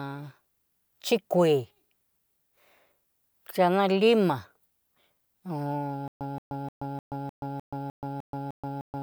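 From 6.08 s to the end, there is a stutter with silent gaps: a 174 ms fragment repeats ten times, each followed by 129 ms of digital silence, a steady 303 ms cycle. A stalled stream likely kept replaying its last fragment, losing the intended audio.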